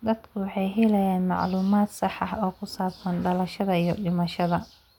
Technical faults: none

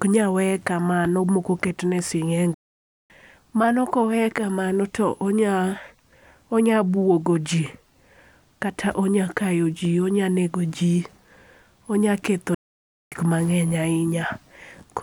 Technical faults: playback stall

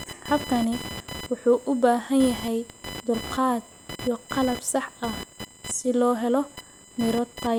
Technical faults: computer activity noise

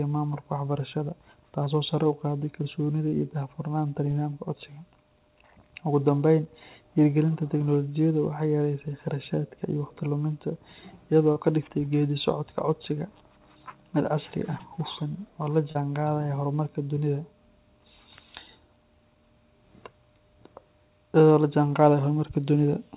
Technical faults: short concealed packet loss

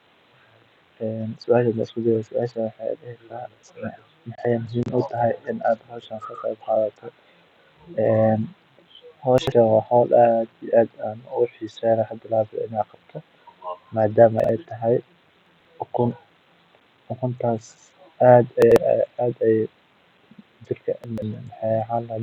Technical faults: chunks out of order

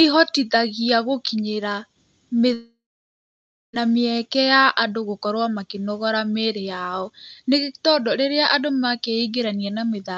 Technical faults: long network dropout

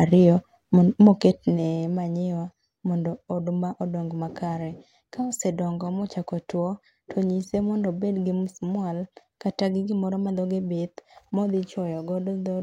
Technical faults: none

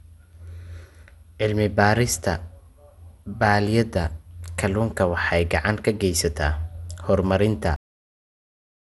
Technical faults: generation loss; cut-off end

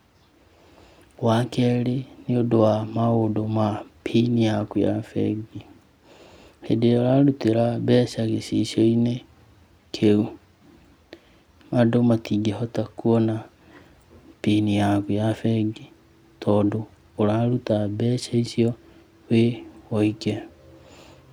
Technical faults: none

